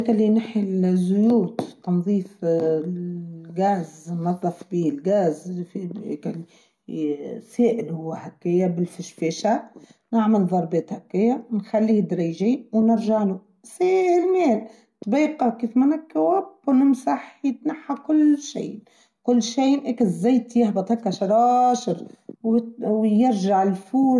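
Listening through this speech recording, nothing stood out as a technical problem at any point.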